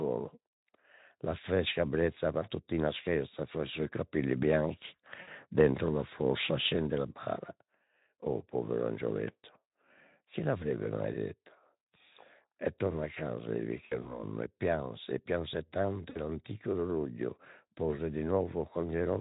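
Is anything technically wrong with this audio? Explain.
Yes, there are three short dropouts from VoIP packet loss concealed by the speech codec. The first is at 5.21 to 5.28 s, right after "capelli bianchi", covering about 60 ms. The second runs from 13.85 to 14.23 s, after "torna a casa il" and before "e pianse e pianse", with about 100 ms lost in bits spread over 200 ms and no gap longer than 60 ms. The third is at 16.09 to 16.19 s, after "pianse e pianse tanto", again about 60 ms.

At each one, the decoder fills the gap by stretching its last pitch and filter, dropping the gain frame by frame. You hear a buzzy tone or coloured noise that sags in level. Because each frame builds on the one before, the sound stays weak or distorted for a moment after the packets come back. The Speex coding underneath sounds light, consistent with roughly 15 kbps.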